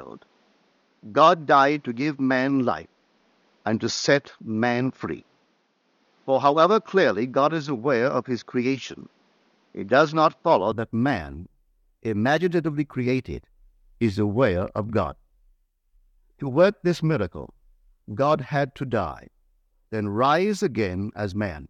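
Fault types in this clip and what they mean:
Input switched to a poorer device: the recording likely started on a lesser input and changed over at 10.72 s. Until then the speech carries nothing above 6.8 kHz and sounds dull over faint extra noise, then it brightens with no gap or level jump.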